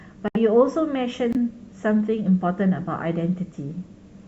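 At 0.28 to 0.37 s and again at 1.31 to 1.36 s the speech drops abruptly into silence: corrupt frame muted. Damaged compressed frames were rejected by the decoder and replaced with silence. The gap lengths suggest three frames and then two, while timing is preserved.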